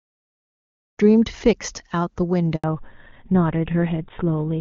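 A speech recording arrives over a clean HD Voice link, fading in smoothly over roughly the first second, and then suffers a handover gap from 2.56 to 2.64 s. For 80 ms the voice falls away almost at once and there is plain silence, because no speech frames were delivered while the call switched networks. Unlike packet-loss concealment, nothing is smeared or repeated to cover the hole; it is a single clean drop followed by a changed sound. That change is a fallback to narrowband: from 2.64 s to the end, everything above 4 kHz is gone, and the speech turns dull and rougher, consistent with a switch to a GSM-style full-rate codec. What separates this from a simple low-pass filter is that it starts exactly as the gap ends and brings coarser codec texture along with the lost top end.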